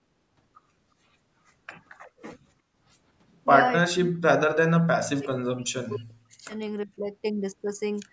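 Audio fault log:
3.92 to 6.54 s and 6.85 to 6.98 s: speech suppressed in double talk. With both ends talking at once, the echo canceller likely could not tell the near talker's speech from loudspeaker echo and turned both down together. In the longer stretch the speech sinks by up to about 40 dB, around two seconds affected in all. The second dip is brief and shallower, about 20 dB for roughly a tenth of a second.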